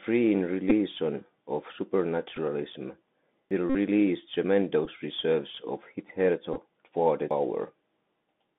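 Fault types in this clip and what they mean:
Bluetooth CVSD headset codec: The link carries the sound through the narrowband 64 kbps CVSD codec, limiting it to about 200 Hz–3.6 kHz, with granular hiss and scratchy sibilants.
Bluetooth headset packet repeated: Lost headset packets were filled by replaying the previous one, giving small ticks and, in the 52.5 ms run near 3.70 s, a brief buzz.
Audio missing between chunks: Processing in 4 s chunks likely drops a piece at each changeover, so about a fifth of a second vanishes abruptly at 3.51 s and 7.31 s.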